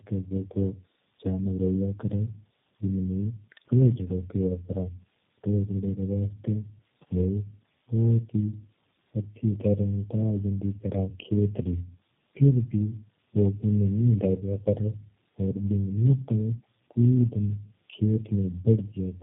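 All the way through, the speech suffers tandem speech coding, sounding like three low-rate speech codecs in a row, which fits a chain that includes G.729A at 8 kbit/s. Each stage re-codes the last one's damage, so it's rough, muffled and warbly.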